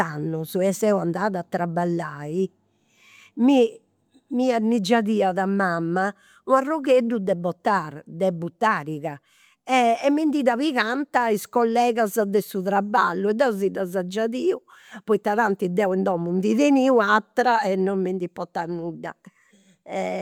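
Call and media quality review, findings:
No faults found in clip.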